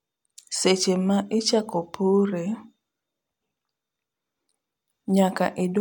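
No technical faults are audible.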